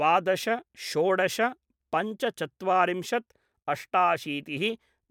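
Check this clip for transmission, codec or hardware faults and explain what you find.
Nothing in this bit of speech jumps out at me as a fault, so there's nothing to flag here.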